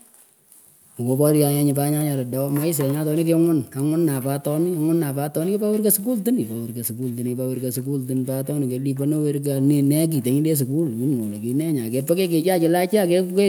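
No technical faults turn up anywhere in the speech recording, with the signal holding steady throughout.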